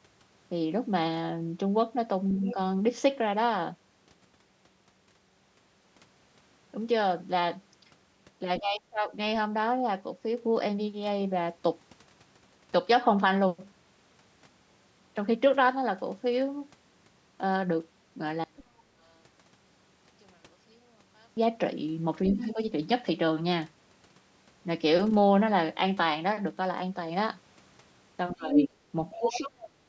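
At 2.47 to 2.54 s the other side's voice leaks through, a brief scrap about 15 dB under the talker, likely an echo canceller missing some loudspeaker pickup. Around 8.6 to 9.1 s there's speech suppressed in double talk: the talker dips by roughly 25 dB, likely because both sides spoke at once and the canceller turned everything down. From 18.44 to 21.37 s one channel is inverted, likely reversed polarity, so summing to mono cancels the common sound and the level collapses by about 35 dB. In that stretch, a faint leak of the other side's voice, about 25 dB down, shows up at 18.57 to 18.63 s. Then at 18.85 to 18.98 s the background is gated by the echo canceller, dropping about 7 dB for roughly 150 ms before recovering. At 22.3 to 22.53 s there's more leakage about 15 dB down, overlapping a quick double-talk dip of about 10 dB from 22.36 to 22.58 s. Near the end, from 28.34 to 29.61 s, the talker gets suppressed by around 20 dB in patches, while from 28.53 to 29.69 s the leaked far-end voice sits about 5 dB louder than the talker.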